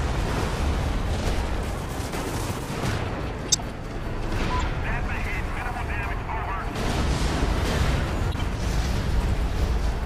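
Short misplaced bursts of energy at 3.49–3.61 s, 4.60–4.63 s and 8.32–8.38 s come from corrupt frames decoded despite flipped bits, spreading energy to wrong frequencies.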